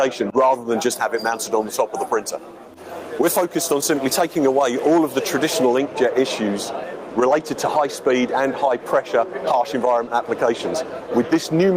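Gain pumping runs through the whole clip: the level swings by around 10 dB, likely from gain set too high with a fast limiter clamping down, and the waveform envelope visibly rises and ducks.

From 0.54 to 5.78 s, pre-emphasis is left on: treble stays boosted, about 10 dB at 10 kHz relative to 1 kHz, consistent with an uncorrected 50 µs FM curve. It sounds bright and thin, and a spectrogram shows a brighter top band.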